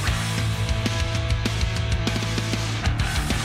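No technical faults are audible anywhere in the recording.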